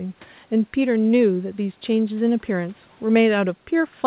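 No faults in this speech; the band stops at about 4 kHz, which fits a narrowband telephone codec on a normal call path.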